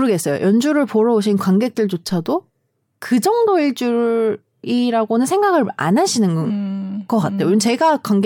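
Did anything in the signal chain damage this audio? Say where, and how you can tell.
Yes. A DC step at 2.10 s: the waveform's zero line jumps by about -32 dBFS, heard as a low thump while the speech carries on unchanged. The offset then drains away through a 2 Hz high-pass, pointing to converter recalibration or an offset input switched in.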